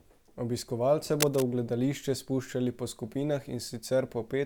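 A worn cable or connector was likely moved, its contact resistance jumping about, and from 1.20 to 1.43 s this produces cable scratch noise: a dense, uneven burst of scratching and rustling, nearly as loud as the speech beneath it.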